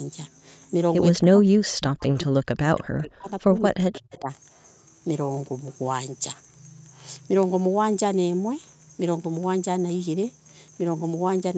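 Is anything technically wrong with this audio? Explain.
Yes. There are two faults.

From 1.17 to 2.41 s and again from 2.72 to 4.3 s, the speech sinks sharply, by up to around 40 dB. This is speech suppressed in double talk. Both sides likely talked at once, so the echo canceller turned the talker down along with the echo.

From 3.94 to 4.17 s there is an echo leak. A faint copy of the speech returns about 225 ms late, roughly 30 dB under it. The far end's canceller likely missed some loudspeaker sound reaching its microphone.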